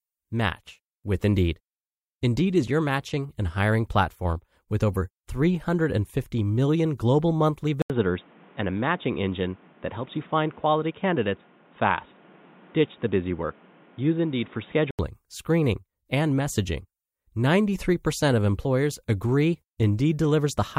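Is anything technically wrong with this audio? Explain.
Yes. From 7.82 s to 14.99 s the sound suddenly goes dull and boxy, with nothing above 3.8 kHz, then opens back up. There's a short gap of about 80 ms at the switch-over and a new background noise sitting roughly 30 dB under the speech, though loudness barely moves. That's most likely the input switched to a poorer device, such as a narrower-band mic or a headset call profile, and then back again.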